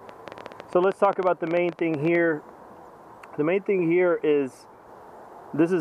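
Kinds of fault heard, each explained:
Train of clicks: a run of similar, evenly shaped pulses, likely from interference or a faulty connection or supply, ticking over the audio from 0.09 to 2.16 s at about 11.7 per second, irregularly spaced, roughly thirty in all, rising about 5 dB above the signal.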